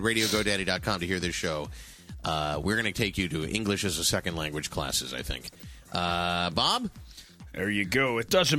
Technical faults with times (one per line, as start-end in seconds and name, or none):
2.23-2.29 DAB burbling
5.46-5.62 DAB burbling